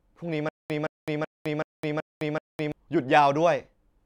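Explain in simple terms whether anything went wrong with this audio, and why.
Something went wrong between 0.49 and 2.72 seconds. It is a stutter with silent gaps. A 168 ms burst repeats six times, each followed by 210 ms of dead silence. The player likely stalled and replayed its last fragment. What should have played is lost.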